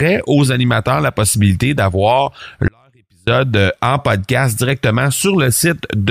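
A break in the signal path, likely a momentary loss of the source feed while the downstream chain stayed live, produces an audio dropout to a faint residue from 2.68 to 3.27 s, about 0.59 s long. Right after "animateurs la possibilité d'avoir" the speech cuts off abruptly and only a faint leak remains, roughly 40 dB below the normal level, before the speech snaps back with "euh en podcast directement", with no fade at either edge.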